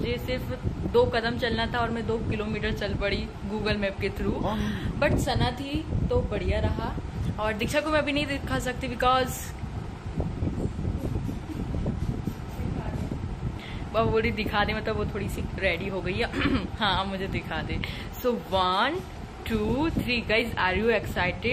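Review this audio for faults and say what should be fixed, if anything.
MP2 compression, throughout: the dull, granular, gurgling sound likely comes from MPEG Layer II, switching off upper sub-bands and coarsely quantising the rest, consistent with about 80 kbps.

DAB burbling, at 2.34–2.52 s, 10.20–10.23 s and 12.75–13.06 s: bit errors slipped past error correction, putting short blips of noise into single sub-bands.

To prevent both, capture from a strong, clean DAB signal or a direct digital feed, and use a higher bitrate or a better codec.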